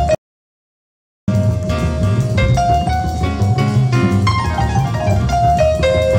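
The audio input was likely lost from 0.15 s to 1.28 s while the recorder kept writing silence, an audio dropout to silence. The sound cuts out abruptly and returns mid-flow, leaving a 1.13 s gap of complete silence with no room tone, and whatever sounded then is gone.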